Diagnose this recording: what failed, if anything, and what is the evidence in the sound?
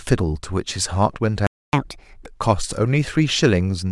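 The playback stage failed first: a playback stall cuts the speech off at 1.47 s and leaves silence until 1.73 s, a gap of about 0.26 s, before the sound resumes. The likely cause is that the player ran dry of buffered data or its output thread was held up, so nothing reached the converter for that quarter-second. The abrupt stop in mid-flow, with no fade, points to starvation on the playback side rather than anything in the recording.

The player then tries to win back the lost time with catch-up at higher speed. From 1.73 s to 2.26 s it resamples the backlog to run at 1.5 times normal speed, which lifts the pitch by around seven semitones. The speech sounds hurried and noticeably higher for about half a second, then drops back to normal rate and pitch once the buffer has caught up with real time.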